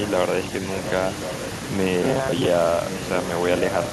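A short speech recording carries two kinds of fault. Echo leak appears at 0.87–0.91 s, 1.2–1.5 s and 2.9–3.22 s as a delayed copy of the voice arriving about 1.08 s after the original. It sits roughly 10 dB below the direct speech in the first two stretches and nearer 15 dB below in the last. The likely cause is a loudspeaker at the far end whose echo canceller let part of the returned signal through. Between 2.03 and 2.47 s the voice turns into a rigid metallic buzz locked at 133 Hz while still loosely tracking the speech. This is robotic sound from repeated short buffers. A 133 Hz buzz fits a segment of about 7.5 ms played over and over, with something like half the audio in that stretch being repeats. Likely cause: audio arriving too seldom, so playback loops the last short buffer in place of the missing signal.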